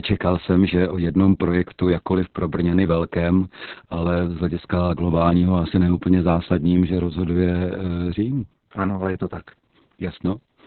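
From start to finish the speech carries Opus voice compression, with heavy damage. Nothing survives above 4.3 kHz, so the voice sounds muffled and telephone-narrow, which points to a narrowband SILK mode at a very low bitrate, around 6 kbps. What separates this from a plain low-pass filter is the coarse excitation coding: the voice also turns hoarse and slightly robotic, a grainy, buzzing texture that filtering alone would not produce.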